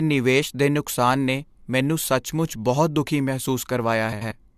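Near the end, from about 4.12 to 4.32 s, there's a case of frames out of order: two neighbouring blocks of roughly 93 ms each swapped places, which fits runs of four frames apiece. The speech garbles into a brief flutter, and no time goes missing.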